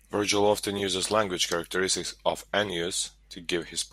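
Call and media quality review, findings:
Brief chirpy noise bursts at 0.77–0.81 s, just before "language characteristic of", and 3.06–3.09 s. Corrupt frame decoded: bit-damaged codec frames played anyway, energy misplaced spectrally.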